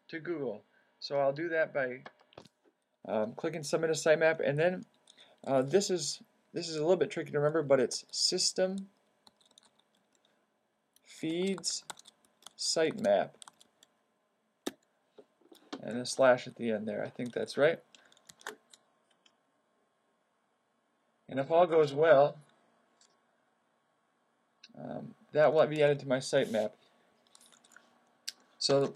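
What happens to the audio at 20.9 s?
An adaptive stream at a lower bitrate runs from 18.68 to 24.68 s: the player switches abruptly, without a gap, to a thinner version, so treble above about 11.5 kHz vanishes and codec artefacts rise, like a very low-bitrate HE-AAC encode.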